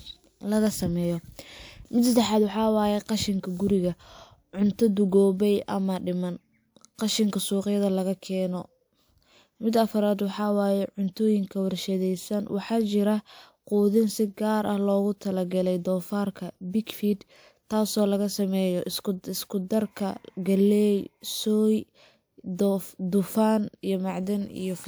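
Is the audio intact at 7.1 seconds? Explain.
Yes, at 7.1 seconds the speech runs cleanly, with no dropout, click, distortion or other fault.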